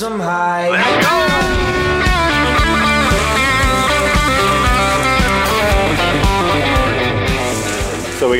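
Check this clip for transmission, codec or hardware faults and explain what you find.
Nothing in the audio stood out as a fault on listening.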